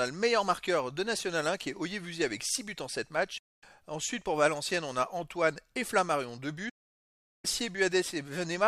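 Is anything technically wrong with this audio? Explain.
Yes. There are two digital broadcast dropouts. From 3.38 to 3.63 s the sound fades out over about 8 ms and stays silent for roughly a quarter second. From 6.69 to 7.45 s a longer 0.74 s hole follows the same brief fade. The receiver stopped getting usable frames and muted until valid ones returned, so the material sent in between is simply gone. Unlike packet-loss concealment, nothing is smeared or repeated. The gap is clean silence with a short fade rather than a click.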